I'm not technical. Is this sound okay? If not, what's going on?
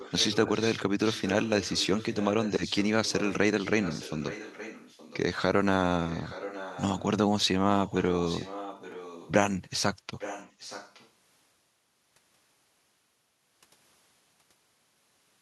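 No. This is an echo leak: the other side is likely on a loudspeaker, and their phone didn't fully cancel what its microphone picked up. So a fainter copy of the speech returns about 0.87 seconds late, at 0 to 0.8, 1.04 to 2.88, 3.05 to 3.34, 3.59 to 5.19, 6.07 to 7.03, 7.86 to 9.32 and 10.18 to 11.1 seconds. It's loudest in that last stretch.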